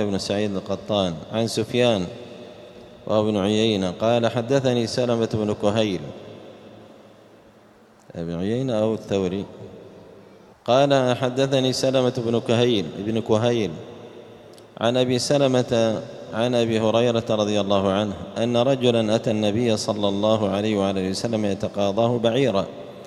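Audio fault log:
There is no fault to log.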